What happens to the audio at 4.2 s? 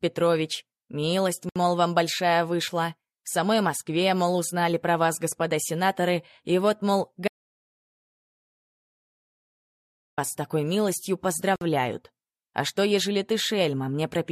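Nothing goes wrong at 4.2 s; the audio plays through that moment intact, with no dropout, click or distortion.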